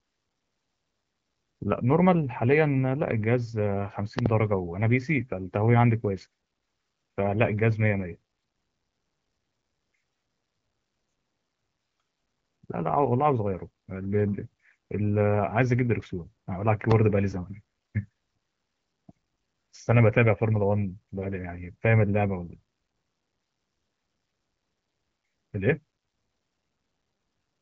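At 4.19 to 4.28 s, a loud pop cuts through the speech as two sharp clicks in quick succession, peaking about 20 dB above the voice. At 16.91 to 16.94 s, a single pop follows, about 15 dB above it. Both are likely voltage pulses, perhaps from a plug, switch or static discharge. The speech carries on underneath each one. The audio stops near 7.2 kHz, which fits wideband coding around 12.65 kbit/s.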